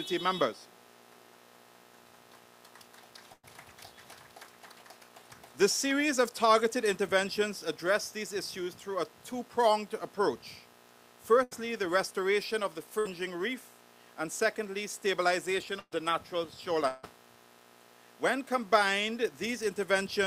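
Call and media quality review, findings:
Burst of packet loss, receive path, concealment covering the gaps: 3.33–3.45 s (about 100 ms lost), 11.43–11.53 s (80 ms), 12.99–13.07 s (60 ms), 15.79–15.93 s (120 ms, last 40 ms silent). Last sound held, fading to buzz or hiss, then audio resumes with content skipped.

Long network dropout, likely network-side stall: 16.87–17.05 s, about 160 ms of audio never delivered. Concealer extends the preceding sound across nearly the whole gap as a decaying buzz or hiss, no silent stretch, then playback jumps ahead past the missing portion.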